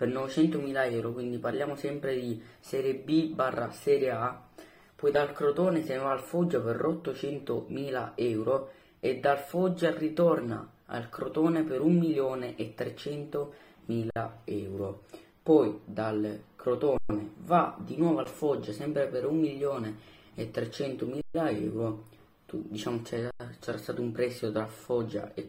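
Five underruns with held sample occur at 14.11–14.16 s (55 ms), 16.98–17.10 s (120 ms), 18.24 s (about 11 ms, which fits a 512-sample buffer), 21.21–21.35 s (133 ms) and 23.31–23.40 s (92 ms). Each time the output buffer empties, the converter holds its last value, and the sound freezes flat with little or no click. Nothing is lost, so playback resumes where it stopped with only a soft transition.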